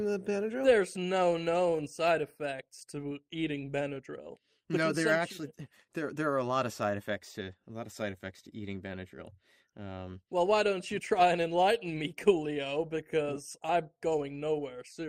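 Clock drift between sender and receiver runs through the whole clip, with the sending clock running about 3% slower than the receiving one. Because audio arrives slightly more slowly than it is played out, the receiver's buffer keeps sinking toward empty. The playback cannot hold a fixed pace against that shortfall, so the timing feels faintly unsteady from start to finish instead of settling into a clean, even flow.

Repeated timing corrections follow from that drift, spanning 0.18 s to 15.08 s. To stop its buffer running dry, the receiver keeps repeating short slices of audio, always stretching and never cutting. Together these repeats add something like 0.4 s over the stretch, leaving playback at 97% speed. The inserts fall at uneven intervals and each is tiny, so they come through as small hiccups and a slightly dragging, wavering tempo.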